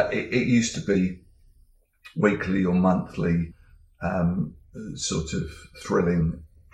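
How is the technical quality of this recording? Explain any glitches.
The recording has three short dropouts, all the same kind: compressed frames skipped. They land at 0.94 s, around 3.50 to 3.52 s, and at 6.2 s. Whole blocks of encoded audio never reach the output, so playback jumps forward: about 50 milliseconds at 0.94 s, roughly a tenth of a second at 3.5 s, and only a sliver at 6.2 s.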